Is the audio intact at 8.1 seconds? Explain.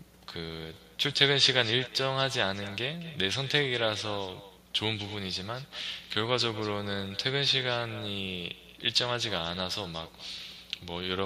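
No, at 8.1 seconds the speech still carries the echo with no canceller that runs through the whole clip. The far end's loudspeaker feeds its microphone and nothing strips it out, so each phrase returns around a fifth of a second later, about 16 dB down and thinner.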